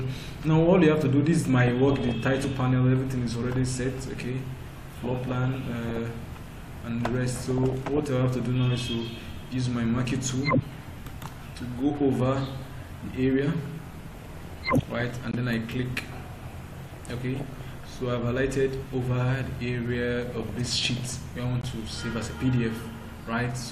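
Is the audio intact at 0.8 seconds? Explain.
No. At 0.8 seconds, as throughout the clip, the sound is dull and carries a gurgling, granular distortion, with upper bands flickering in and out. This is likely MP2 compression: too few bits, roughly what 80 kbps would give, switch off high sub-bands and coarsely quantise the rest.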